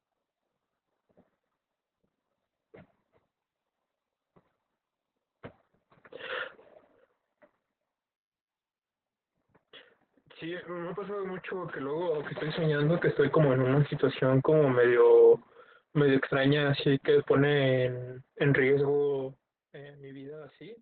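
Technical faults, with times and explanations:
Throughout: Opus voice compression. The speech sounds muffled, hoarse and faintly robotic. Heavy coding at about 8 kbps, in a voice-only narrowband mode, removes everything above roughly 4.2 kHz. The vocal excitation is coded very coarsely, in short frames that fit 20 ms.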